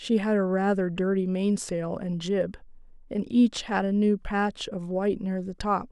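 Nothing stood out as technically wrong on listening to this speech recording.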